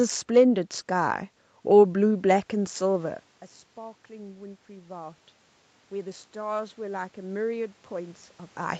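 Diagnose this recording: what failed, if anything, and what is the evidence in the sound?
Automatic gain rising in call processing, 2.53 to 5.24 s and 5.97 s onward: after the input dropped about 19 dB, gain creeps up (about 4 dB at first). Room noise swells with the voice, unlike a talker moving.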